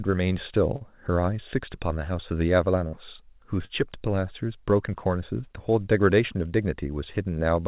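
At 0.76 to 0.83 s a short concealed packet loss occurs: about 40 ms of the call reached the decoder too late, so the receiver extended the preceding speech to cover the hole, leaving a brief smear before the real audio blends back in. At 2.88 to 2.96 s and again at 3.65 to 3.72 s, a burst of packet loss leaves gaps of roughly 40 ms that the receiver papers over with 50 ms and 46 ms of fading continuation. Each is heard as a held buzz or dying hiss, after which the speech jumps ahead with a piece missing, all within a band that stops at 4 kHz, as the call codec's narrowband limit suggests.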